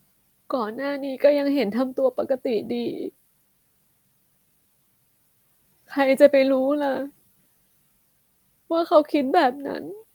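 No technical faults are audible anywhere in the speech.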